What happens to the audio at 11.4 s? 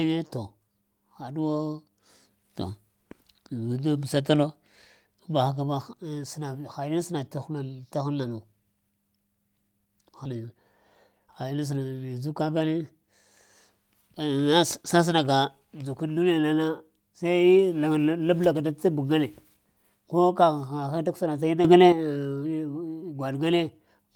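Jitter buffer speed-up from 11.12 to 11.92 s. Tiny pitch-period slices, about 70 ms in total, were trimmed. Speech runs 9% faster, same pitch, hurried.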